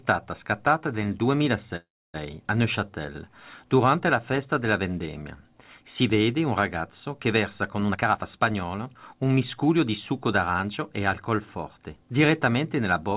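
From 1.76 to 2.16 s there is a call audio freeze, likely caused by packets stalling in transit until the jitter buffer ran empty. The receiver stretched the last sound into a brief fading buzz or hiss, and about 280 ms of that stretch is silence. When the audio resumes, it continues from where it stopped, so roughly 0.38 s of gap has been inserted and nothing is lost. That inserted gap adds 378 ms to the playout delay.

From 7.88 to 9.89 s, a jitter buffer speed-up cuts back the buffered delay. The receiver repeatedly cut out short segments of one or a few pitch periods, removing around 0.4 s in total. The audio in this stretch plays at about 119% of normal speed with its pitch unchanged, so it sounds hurried. Throughout the clip, the call path limits the audio to below 4 kHz with some coding noise, which fits G.711 mu-law at 64 kbps.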